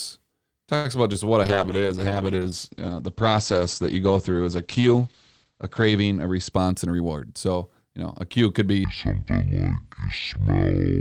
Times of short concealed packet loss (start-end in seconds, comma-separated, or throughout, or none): 1.13-1.30